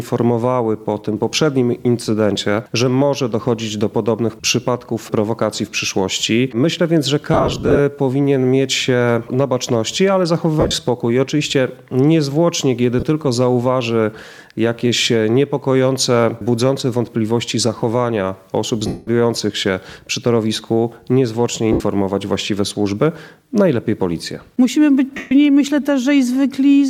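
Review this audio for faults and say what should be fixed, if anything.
Lost LE Audio frames: the Bluetooth LE Audio link dropped frames at 7.34–7.80 s, 10.60–10.74 s, 13.00–13.03 s, 18.87–19.07 s, 21.72–21.80 s and 25.17–25.32 s. The gaps fit 7.5 ms LC3 frames. The decoder filled each gap by reusing the last spectrum with randomised signs, which turns the sound into short noisy smears. The worst stretch is around 7.3–7.8 s, where 270 ms went missing in scattered runs of up to about 40 ms.

Improving the radio link margin, or allowing more retransmissions on the isochronous channel, would prevent these dropouts.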